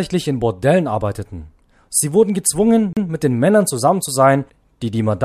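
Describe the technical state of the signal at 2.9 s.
A CD skip runs from 2.93 to 2.97 s: the laser jumps tracks, muting about 40 ms as a short gap, visible as a brief waveform gap and vertical spectrogram break.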